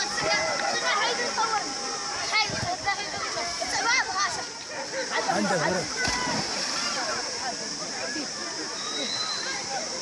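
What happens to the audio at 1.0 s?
Nothing goes wrong at 1.0 s; the audio plays through that moment intact, with no dropout, click or other fault to be heard.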